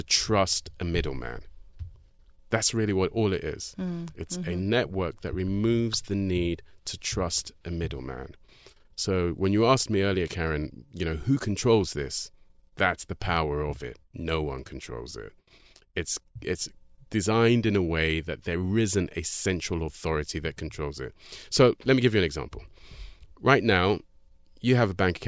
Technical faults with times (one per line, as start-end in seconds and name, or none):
none